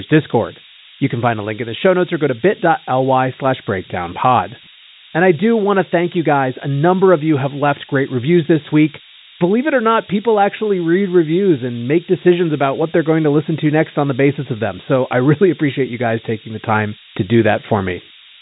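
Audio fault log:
throughout: low bit depth with noise shaping. With only 3 bits, the rounding error is pushed upward into a steady, thin hiss nearly as loud as the speech, climbing toward the 3.8 kHz G.726 band edge. Unlike ADPCM hiss, it stays constant rather than following speech level.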